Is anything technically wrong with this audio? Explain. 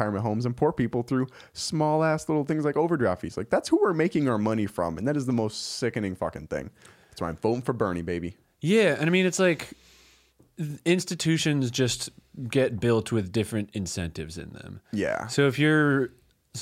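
No, nothing technically wrong can be heard in this speech recording; the signal stays intact and steady throughout.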